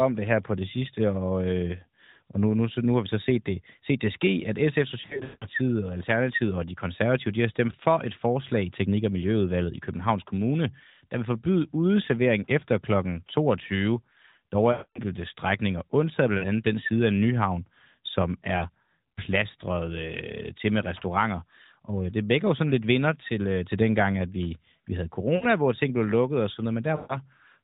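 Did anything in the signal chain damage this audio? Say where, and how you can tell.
Yes, at the network stage: the radio link dropped AMR speech frames at 5.02–5.45 s, 14.72–14.99 s, 16.38–16.47 s, 18.58 s, 25.36–25.47 s and 26.96–27.18 s. Each time the decoder repeats its last good pitch and vocal-tract settings while the gain falls. The 18.58 s hit is a quick dip or warble. The longer gaps near 5 s and 14.7 s smear and fade toward silence, and the speech then returns thin or rough over the narrowband AMR codec's band-limited sound.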